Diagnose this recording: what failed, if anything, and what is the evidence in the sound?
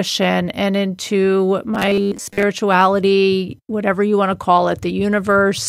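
From 1.75 to 2.43 s the speech collapses into a rigid metallic buzz pitched at 100 Hz, the robotic sound from repeated short buffers. It likely sits at the driver or buffer stage: audio arriving too seldom, with a roughly 10 ms block replayed over and over, standing in for most of the real material in that stretch. On a waveform the segment shows identical 10 ms cycles; a spectrogram shows evenly spaced harmonics every 100 Hz.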